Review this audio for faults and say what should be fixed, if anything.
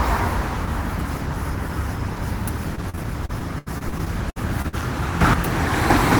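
Repeated packet loss (robotic sound) runs from 2.75 to 4.75 s. Thirteen gaps hit in under two seconds, the longest about 78 ms. Each one was patched by stretching the last bit of sound, so roughly a fifth of that stretch is concealment rather than real audio, and it comes out choppy and robotic with fragments missing. Better jitter buffering and redundancy, such as forward error correction, on the network path would prevent it.

A sudden gain jump occurs at 5.21 to 5.34 s. The sound and its background noise rise together by about 8 dB in one step, with no fade. This is likely a gain setting or bit shift applied instantly rather than ramped over a few milliseconds. Ramping any gain change smoothly would prevent the jump.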